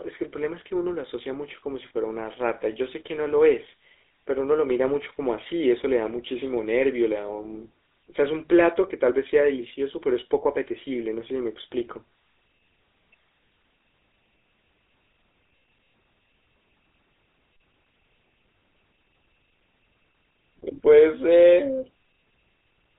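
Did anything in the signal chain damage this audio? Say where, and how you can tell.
Yes, at the codec stage: GSM full-rate coding runs through the whole clip. The speech is confined to roughly 300 Hz to 3.7 kHz with nothing above 3.8 kHz, and a buzzy, gravelly roughness from the pulse-driven excitation, consistent with a 13 kbps vocal-tract model.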